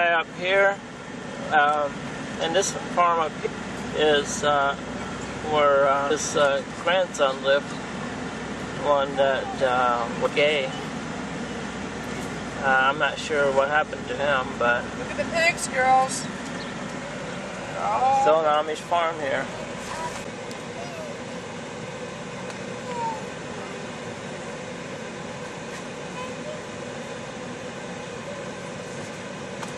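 Damaged data in a compressed stream at 3.43–3.47, 6.10, 10.25–10.27, 17.03 and 28.16 s: the decoder misreads corrupted frames and resyncs, heard as brief chirps, clicks or holes, visible as short vertical disruptions or gaps.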